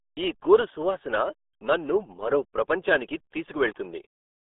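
A short speech clip carrying the RealAudio 14.4 codec throughout, with heavy damage: muffled, gargly speech confined to roughly 300 Hz to 3.6 kHz, nothing above 3.8 kHz, which fits an 8 kbit/s dial-up-era coder. A spectrogram shows a hard ceiling and smeared, blotchy harmonics.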